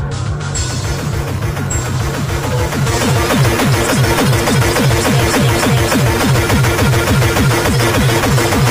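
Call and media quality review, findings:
Damaged data in compressed stream, 3.86 s: brief blip in the sound. Probable component: decoder input, corrupted or missing bytes in the compressed stream. Decoder misreads the affected frame, loses sync, resumes at the next valid frame header.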